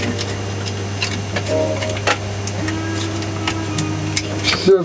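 Throughout, gain pumping: a likely over-driven input with a fast limiter clamping each loud sound, so the gain swings by around 5 dB, squashing the dynamics.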